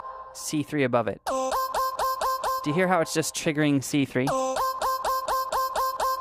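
Between 3.69 and 4.80 s the audio shows repeated stalls (stutter): eight short breaks, none longer than 15 ms, where packets arrived late and the jitter buffer ran dry, so the receiver stretched the last sound to cover about 87 ms in total while nothing was lost. The result is a dragging, stuttering rhythm. On a spectrogram these appear as brief smeared or repeated columns; on the waveform, short copied stretches of the preceding cycle.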